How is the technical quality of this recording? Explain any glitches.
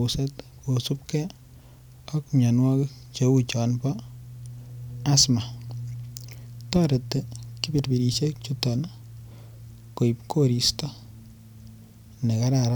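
Nothing in the recording jumps out as a technical glitch, so there's really nothing to flag here.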